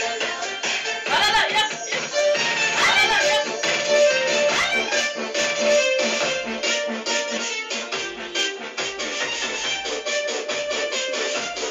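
From 2.11 to 7.37 s, a doubled audio track appears. A dry copy trails about two seconds behind, roughly 5 dB quieter, starting and stopping abruptly. A second capture path is the likely cause.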